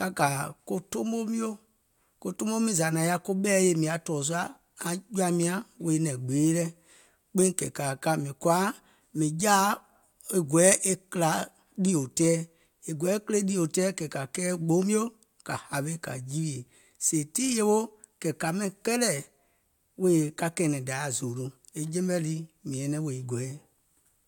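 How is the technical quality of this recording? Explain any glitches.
The technical quality of the recording is sound, with no glitches to explain.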